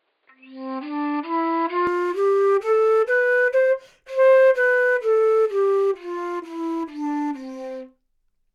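The input likely started on a poorer device and switched to a better one at 1.87 s, so this recording of everyday sounds passes nothing above 4.9 kHz from the start until then, sounding dull and boxy. The sound brightens abruptly at 1.87 s with no gap and no level jump. During the opening stretch a faint added background noise sits far below the sound.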